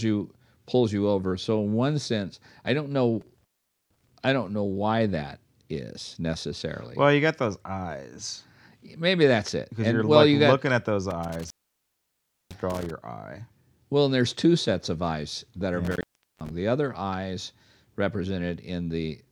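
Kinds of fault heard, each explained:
Intermittent contact: a loose cable or plug in the signal chain briefly loses connection, so the speech signal drops out entirely, with crackle at each break and re-make and faint hiss while the line is open. It happens three times: after "sense I don't know" at 3.21 s for about 0.45 s, after "got looking at those" at 11.11 s for about 1 s, and after "eyes that are yeah" at 15.85 s for about 0.45 s.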